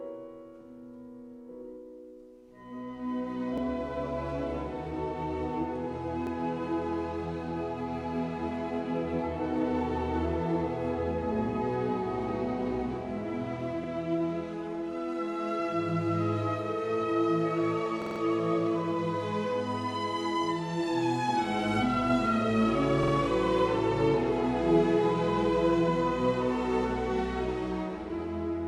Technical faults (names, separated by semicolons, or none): repeated buffer